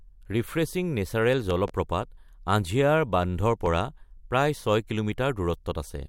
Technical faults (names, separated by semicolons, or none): loud pop